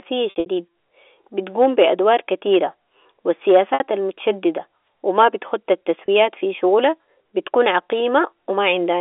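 A speech clip over what sounds like G.711 telephone coding, with three bursts of packet loss with pitch repetition: scattered gaps at 0.3–0.46 s, one at 3.74–3.80 s after "بتقوم بادوار كتيرة و", and a brief one at 6.06–6.08 s before "في شغالها بتكون". The receiver replays the last pitch period across each hole, so you get a short buzzy, held-note smear.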